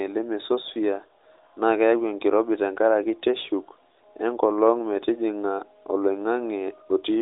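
No technical faults can be heard in the recording. The speech comes through an AMR narrowband mobile codec, with a telephone band of roughly 250 Hz to 3.7 kHz, nothing above 3.8 kHz, and only light coding damage, which fits the codec's 12.2 kbps mode.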